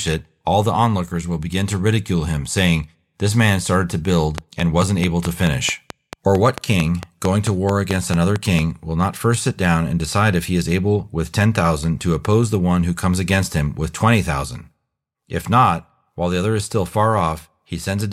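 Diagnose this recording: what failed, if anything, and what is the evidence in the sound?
A train of clicks runs from 4.38 s to 8.60 s, starting just after "man started to" and ending before "will not first sit". Around twenty similar clicks arrive at a regular 4.5 per second and stand about 15 dB above the speech. They tick through pauses as well, so they sit on top of the signal rather than coming from it. The stage is likely the analogue side, with nearby equipment interference, a faulty connection or a power-supply fault injecting a repeating pulse.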